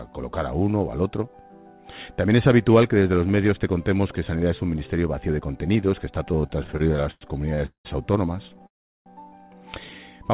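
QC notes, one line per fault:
6.28–7.87 s, repeated stalls (stutter): 15 gaps covering about half a second, the longest 191 ms. The jitter buffer kept emptying and the receiver stretched the last sound, so the audio drags without losing anything.
8.49–8.65 s, repeated stalls (stutter): four brief gaps of at most 12 ms, again filled by continuing the preceding sound. This produces a short choppy flutter with nothing missing.
8.67–9.08 s, call audio freeze: the sound holds briefly, then goes silent for roughly 0.4 s and resumes where it stopped. Packets were likely held in transit, which inserts a 392 ms delay into the 4 kHz band-limited call audio, consistent with G.711 at 64 kbps.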